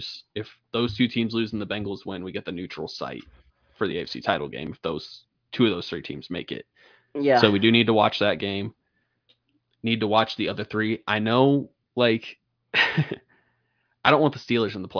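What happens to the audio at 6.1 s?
Nothing goes wrong at 6.1 s; the speech continues cleanly through that moment with no dropout, click, distortion or other fault.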